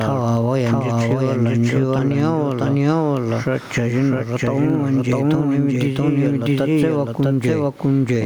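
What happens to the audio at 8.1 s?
At 8.1 s the speech is still heard twice. This doubled audio track runs through the whole clip. A second full-band copy trails about 0.7 s behind, at roughly the same level. It has no decay or room colour. It is likely a second capture path mixed in.

Gain pumping is also present at 8.1 s, as it is throughout. The gain swings by around 10 dB. Loud and soft parts sit close together. The likely cause is gain set far too high, with a fast limiter pulling it back down. The faint room noise sits about 37 dB below the speech.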